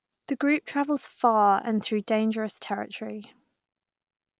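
No technical faults can be heard anywhere in the speech.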